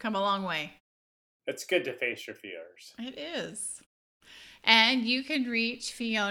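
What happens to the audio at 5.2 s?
Nothing goes wrong at 5.2 s; the audio there is intact, with no glitch or distortion.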